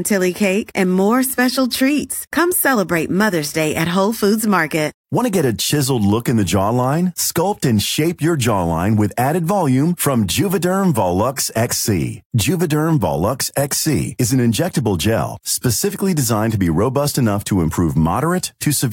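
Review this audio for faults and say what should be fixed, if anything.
Nothing to fix: no faults found in this speech recording.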